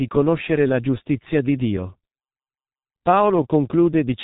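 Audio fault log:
throughout: G.723.1 codec, heavy damage; nothing above 3.8 kHz and slow-updating 30 ms frames leave the speech muffled and hoarse, consonants smeared, consistent with a roughly 6.3 kbit/s rate.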